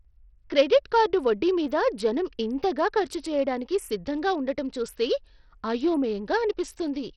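Throughout the speech, the treble is thin and unstable, flickering in and out, with a gritty noise and aliasing riding on the sound and nothing above 17 kHz. This is likely Bluetooth SBC compression at a heavily starved bit pool, consistent with roughly 64 kbps.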